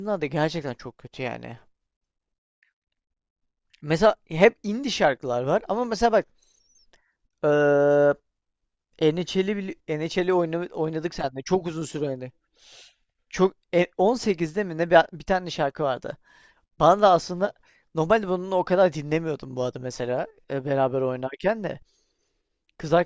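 No technical faults are audible at any point in the recording.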